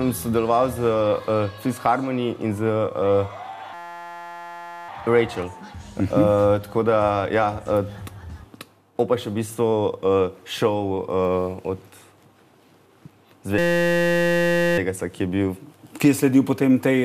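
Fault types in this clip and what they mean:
System hang loop: the system froze while the sound hardware kept cycling one 5.8 ms piece of its buffer, which fits a 256-sample buffer, so the sound becomes a steady 172 Hz buzz from 3.74 to 4.89 s and from 13.58 to 14.78 s.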